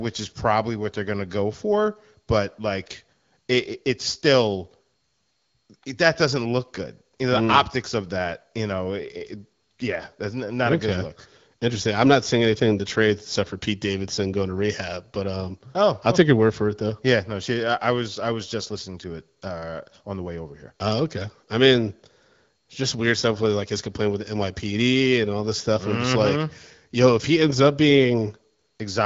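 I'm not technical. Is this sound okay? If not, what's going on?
Yes, this one's fine, with nothing wrong in it; the speech simply comes across with the slightly trimmed top end of an HD Voice phone call, which is normal.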